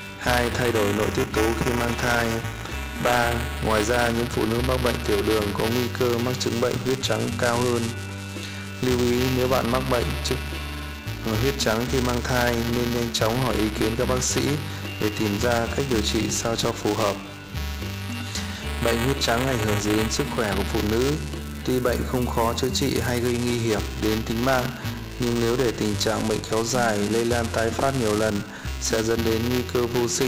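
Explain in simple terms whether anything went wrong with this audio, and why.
Something went wrong for the whole clip: buffer tearing. The software filling the audio buffer and the hardware playing it have drifted out of step, so in every buffer a small slice, a few percent, is stale audio from one lap earlier, about 5 ms old. The hard joins repeat about 345 times a second, which fits a 128-sample buffer, producing a steady robotic buzz that is heard only while sound is playing.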